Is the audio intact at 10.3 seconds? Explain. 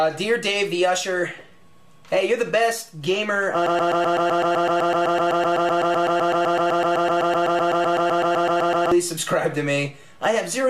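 Yes, the audio is intact at 10.3 seconds, with no fault audible at that moment.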